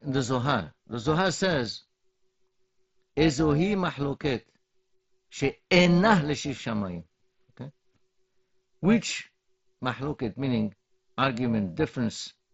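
It's a speech clip with an overlap-add ripple running the whole way through. The audio was chopped into windowed frames and stitched back together with an overlap that doesn't add up to a flat gain, so the level pumps by about 6 dB once per frame. At a frame rate of around 400 Hz that's far too fast to hear as a tremolo, so it comes across as a rough, buzzy, slightly robotic edge on everything. On top of that there's concealed Bluetooth headset packet loss in two places. At 4.02 s it sounds like a single lost packet of about 7.5 ms, and the receiver patched it by repeating a matching bit of the previous waveform, so you barely notice it. The second one, from 5.83 to 5.86 s just before "l'shiv shamayim okay", is longer at about 22.5 ms, which fits roughly three packets going missing. That one gives a short held buzz and a little warble as the real audio comes back in. Underneath all this, the mSBC link caps the bandwidth at 8 kHz and adds a light grain on the louder bits.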